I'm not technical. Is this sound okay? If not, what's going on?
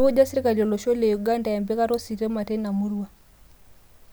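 Yes, this sound is okay, and nothing is going on with it.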